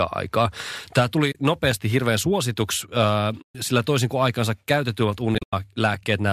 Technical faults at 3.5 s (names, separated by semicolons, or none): AAC frame loss with muting